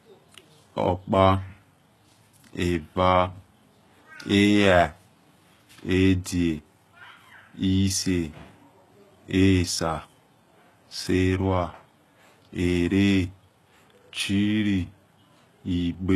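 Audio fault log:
Throughout, HE-AAC compression: the speech's upper range sounds synthetic and gritty, with lispy, metallic s sounds. This is likely spectral band replication at a very low bitrate, near 16 kbps. A spectrogram shows copied, smeared treble that cuts off sharply at 12.3 kHz.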